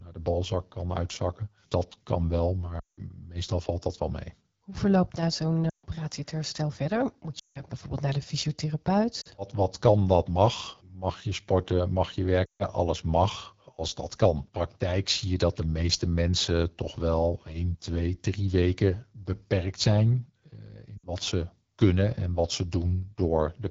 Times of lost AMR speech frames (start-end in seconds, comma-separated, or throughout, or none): 2.80-3.00, 5.69-5.85, 7.39-7.62, 9.21-9.28, 12.46-12.68, 20.98-21.07